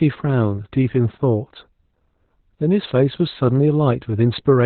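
This speech clip suffers from Opus voice compression throughout. Nothing survives above 4.2 kHz, so the voice sounds muffled and boxed-in, and the heavy, coarse coding of the excitation in the SILK mode leaves it hoarse and faintly robotic, which points to a bitrate around 8 kbps. On a spectrogram the energy stops at a flat ceiling near 4.2 kHz with an empty band above, and the harmonics look smeared and grainy.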